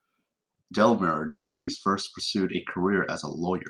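From 1.27 to 1.69 s, a long network dropout likely cut off the incoming audio, losing 0.4 s of speech. The receiver stretched the last sound into a fading buzz, then left 0.31 s of silence before the speech returned, further on.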